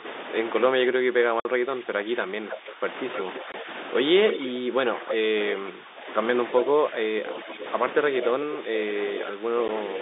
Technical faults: speech suppressed in double talk; packet loss filled with silence; echo leak

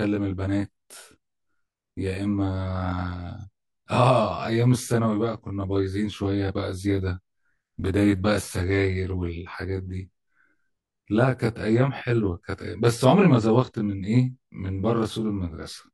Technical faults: channel delay (comb filtering)

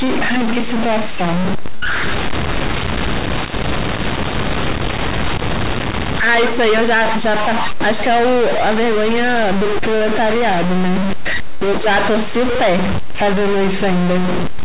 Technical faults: stuck bit; burst of packet loss

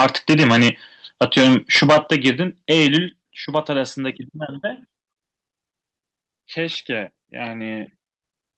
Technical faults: microphone overload; microphone volume stepped down

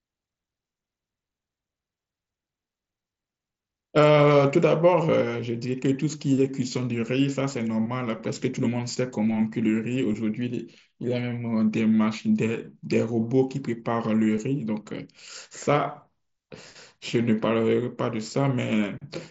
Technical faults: none

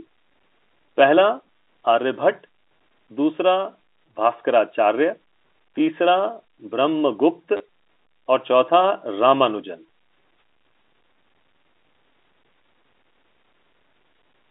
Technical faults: packet loss with last packet repeated

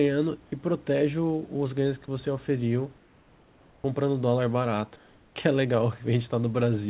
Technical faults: sound dropped by the voice detector; comfort noise in place of the background

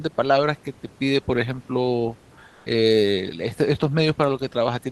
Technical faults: comfort noise in place of the background

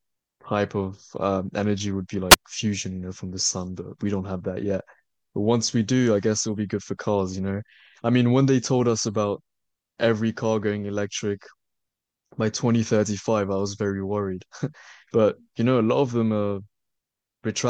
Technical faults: wireless microphone squelch dropout

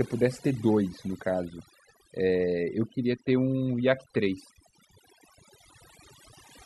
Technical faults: overdone noise removal

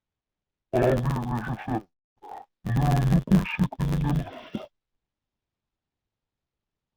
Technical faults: interleaved audio read as planar

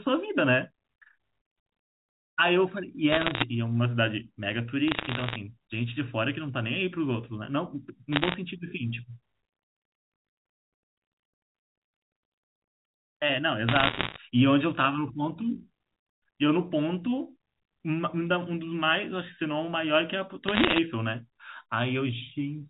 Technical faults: bit errors on a digital phone line

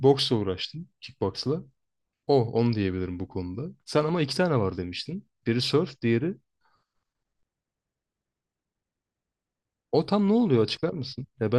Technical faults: none

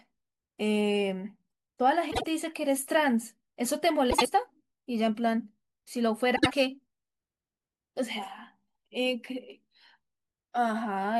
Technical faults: frames out of order

